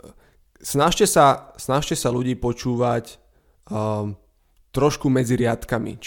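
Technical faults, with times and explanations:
Listening to the speech recording turned up nothing that stood out.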